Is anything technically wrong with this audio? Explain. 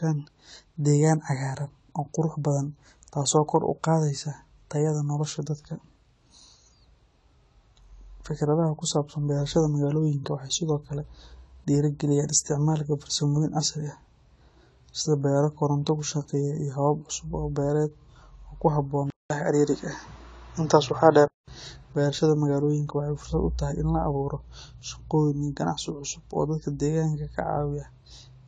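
Yes, there are two faults in this speech clip.

Throughout the recording there is audible damage from what is likely AAC compression. Nothing is present above 11.5 kHz, and the remaining spectrum sounds thinned and smeared. This fits AAC-LC running at a low bitrate around 32 kbps: the encoder drops the top band and quantises the rest coarsely against its masking model. The result is a dull tone with a watery, swirling texture on sustained vowels and fizzy sibilants.

From 19.10 s to 21.48 s the sound changes abruptly, consistent with an input switched to a poorer device. A gap of about 200 ms marks the changeover. During this section the bandwidth collapses to nothing above 7.2 kHz, the level shifts by about 5 dB, and a faint new noise floor appears about 50 dB below the signal. The speech sounds boxier and narrower until the original character returns at 21.48 s.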